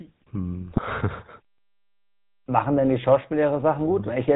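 A short speech clip that has passed through the GSM full-rate codec for its whole length, with plainly audible damage. The sound is buzzy and gravelly, which fits the 13 kbps full-rate coder: it rebuilds the voice from a vocal-tract filter fed by a sparse, regularly spaced pulse excitation, so fine detail in the voice becomes a coarse rasp. On a spectrogram nothing appears above 4 kHz, the harmonics look smeared and grainy, and the frame-by-frame coding shows as faint regular texture along the time axis. From 0.70 to 0.82 s there are GSM bit errors. The speech breaks into a brief squawk and gargle because corrupted filter, pitch and gain parameters reach the decoder. The damage spans several consecutive 20 ms frames, consistent with a bit error rate near 1.6 percent. On the spectrogram this stretch shows abrupt blocky shifts in spectral shape and misplaced harmonic bands. The waveform shows sudden jumps in level and jagged, irregular cycles that change at frame boundaries.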